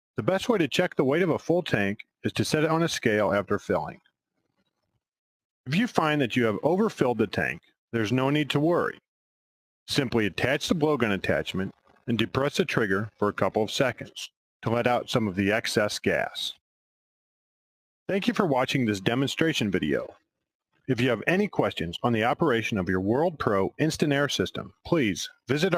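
Between 4.38 and 4.97 s the audio is cut by the noise suppressor, which dips it by up to about 20 dB for roughly a fifth of a second rather than muting it like a dropout.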